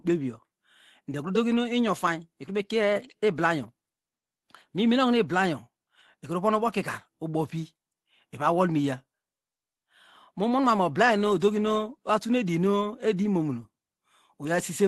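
In this speech recording, packets were lost twice on the Opus call path, and each time the decoder filled the hole with the low-bitrate copy carried in the next packet. This is lost packets rebuilt from error correction. From 1.51 to 1.57 s about 40 ms is rebuilt, which fits two lost packets. From 13.23 to 13.25 s about 20 ms is rebuilt, which fits one. Neither spot drops out, but both sound briefly rougher and noisier. Throughout, the call codec limits the top end to about 12 kHz.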